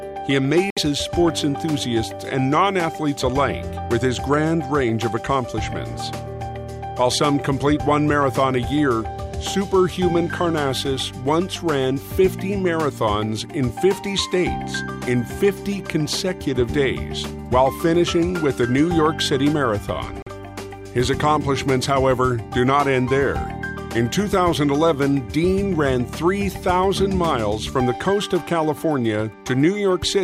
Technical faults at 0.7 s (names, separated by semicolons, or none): Bluetooth dropout